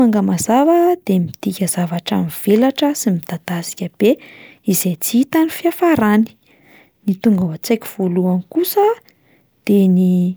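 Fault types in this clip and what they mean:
There are no fault types in this clip to describe.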